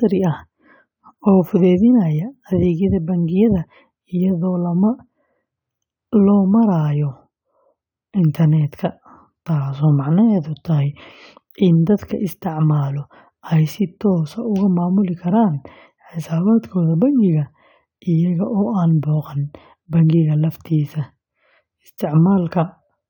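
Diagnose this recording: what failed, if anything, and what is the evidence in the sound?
Nothing failed in this speech recording that can be heard. No event in the sound needs to be traced back to the wiring, converter, buffering, codec, network, storage or playback stage.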